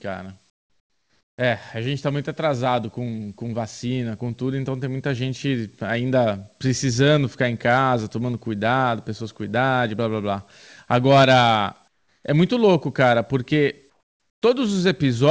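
From 0.50 to 1.38 s, 11.88 to 12.24 s and 13.90 to 14.42 s, the background turns flat and featureless, about 10 to 12 dB quieter: likely comfort noise replacing it during discontinuous transmission.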